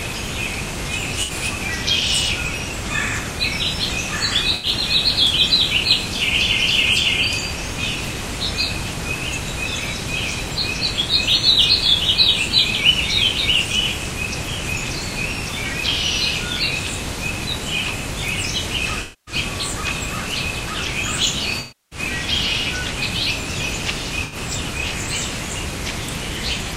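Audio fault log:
1.22–1.31 s, 4.55–4.67 s, 19.01–19.35 s, 21.59–21.99 s, 24.24–24.36 s: AAC frame loss with concealment. Missing frames are rebuilt from the last good spectrum. Brief gaps sound smeared; the 0.26 s and 0.32 s losses are longer.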